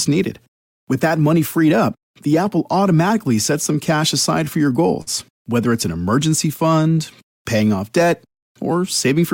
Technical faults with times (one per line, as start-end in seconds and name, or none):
0.00-9.33 clock drift between sender and receiver
0.10-9.15 repeated timing corrections
5.02-5.09 short stall from a late packet